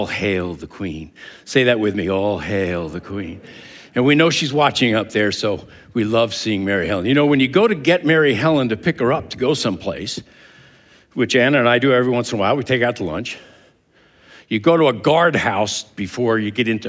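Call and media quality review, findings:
Nothing stood out on listening; the audio reflects ordinary call microphone processing, with its content stopping at 8 kHz and the lowest bass trimmed as expected.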